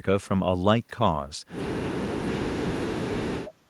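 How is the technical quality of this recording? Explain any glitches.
The recording has one clear glitch: speech suppressed in double talk. From 1.93 s to the end, the speech sinks sharply, by roughly 40 dB at its deepest. The likely cause is an echo canceller that took the talker for loudspeaker echo and suppressed both. The waveform collapses to a thin trace.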